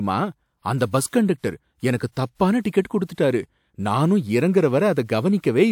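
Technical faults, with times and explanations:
2.12–2.17 s, pre-echo: 48 ms of hiss before "தப்பான டிக்கெட்", codec block noise leaking ahead of the attack; spectrogram shows broadband haze preceding it.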